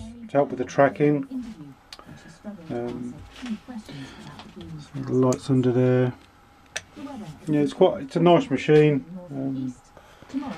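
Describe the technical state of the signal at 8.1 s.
At 8.1 s the signal is intact, with no audible dropout, distortion, glitch or other technical fault at that point.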